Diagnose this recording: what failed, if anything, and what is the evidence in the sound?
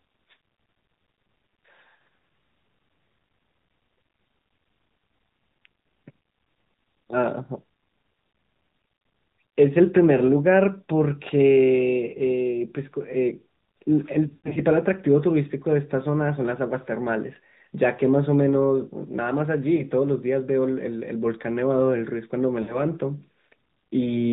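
The codec stage shows AMR narrowband mobile codec damage throughout: nothing passes above 4 kHz, and the speech has a plainly buzzy, synthetic edge from the pulse-driven vocal-tract model. That fits a mid-rate mode, around 10.2 kbps.

Lost AMR speech frames on the network side cause brief dips and warbles at 8.88–9.04 s, 14.28–14.60 s (runs up to 80 ms), 19.76–19.82 s and 22.62–22.76 s. The decoder repeats the last good pitch and filter settings at falling gain, so the speech smears and fades, then returns rough.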